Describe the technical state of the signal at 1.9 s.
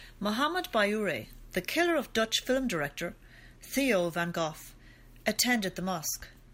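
At 1.9 s the signal is intact, with no audible fault at that point.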